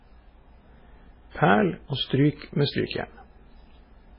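MP3 compression runs throughout the speech. Nothing survives above 5.3 kHz, and the remaining band sounds watery and swirly, with smeared onsets, heavy damage that likely comes from an MP3 encoder starved at a very low bitrate, around 16 kbps.

Pre-echo appears from 2.36 to 2.42 s and again from 2.87 to 2.91 s. The codec spread each block's quantisation noise across sharp attacks, so a short hiss of about 57 ms, then 44 ms, leads into each softened onset.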